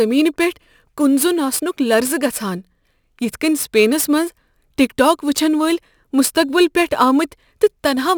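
From start to finish the speech carries crude rate conversion: a 44.1 kHz to 48 kHz change made by repeating the nearest sample, with no filtering. The periodic error, roughly 20 dB below the speech, adds a gritty, inharmonic fizz following loud and high-frequency sounds.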